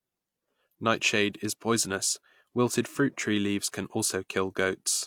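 Speech recording with no audible technical fault anywhere in the clip.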